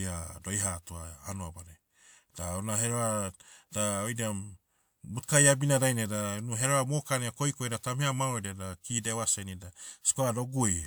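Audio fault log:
No fault is heard in this speech clip.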